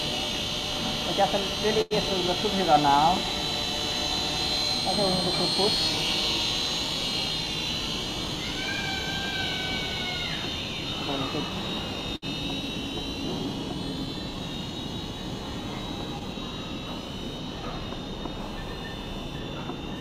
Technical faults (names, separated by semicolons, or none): computer activity noise; short stall from a late packet